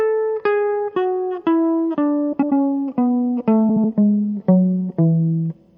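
MP3 compression runs through this music clip from start to finish: the top end is cut off, quiet detail swirls and bubbles as it drops in and out from moment to moment, bright transients carry a metallic chirp, and attacks smear. This is likely a low-rate MP3 encode, with the damage level fitting around 64 kbps, where the encoder runs short of bits, trims the treble at a fixed point and discards weaker frequency content frame by frame. Frames out of order occur at 2.32 to 2.53 s and again at 3.69 to 3.84 s, heard as a brief garbled flutter. In each stretch two adjacent blocks of sound have traded places, about 96 ms each in the first and 72 ms in the second, which fits runs of four and then three frames being decoded in swapped order. Nothing is lost from the timeline, so the music resumes on time after each scramble.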